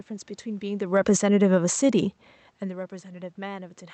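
From 0.58 to 1.85 s the speech starts loud, then sinks steadily by about 7 dB, with the room noise dropping along with it. This is automatic gain falling: the gain control judged the input too hot or its background noise too strong and gradually eased its gain down.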